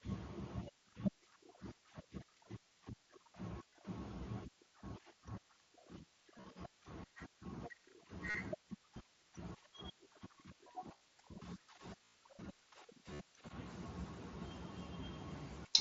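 Concealed Bluetooth headset packet loss hits at 3.77, 6.38, 8.30, 10.95, 12.05 and 13.14 s. Lost headset packets get patched by repeating the last bit of waveform, so you hear buzzy held tones. The worst is about 98 ms at 12.05 s, with a slight warble on recovery.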